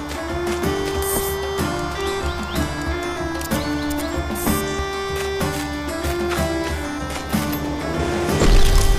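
Nothing goes wrong anywhere in this one; the audio just runs along without a single glitch, dropout or odd moment to point to.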